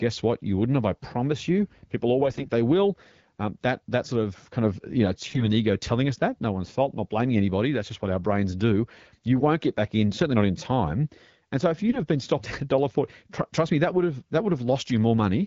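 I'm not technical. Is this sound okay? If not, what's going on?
No. AMR bit errors roughen the speech three times: 2.21 to 2.50 s, just before "they will"; 5.28 to 5.47 s, between "of you know it's" and "ego telling us that"; and 11.88 to 12.00 s, between "so if" and "been stopped". A weak phone link scrambled some of the finer details in each chunk of compressed audio, so the voice keeps its pitch and loudness but briefly turns hoarse, scratchy and gargly.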